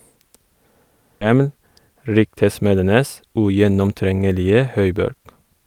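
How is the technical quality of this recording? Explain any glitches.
Two glitches disrupt this speech recording. At 1.21 to 1.23 s there is a skip ahead. About 0.7 s of audio was discarded, and playback jumps straight to later speech. From 3.25 to 4.13 s a jitter buffer speed-up trims short pitch-period pieces, about a tenth of a second in total. The speech runs 12% faster, hurried but at unchanged pitch.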